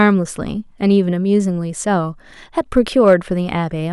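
Hard clipping occurs from 2.77 s to 3.13 s. During this stretch the speech drives some stage about 2 dB past the largest level it can pass, so the loudest peaks are sliced off flat. Those squared-off tops add harmonics high in the spectrum that the original signal never contained. With an overload this small the damage stays at the peaks, heard as a brief crackle riding on the loudest moments instead of a continuous fuzz.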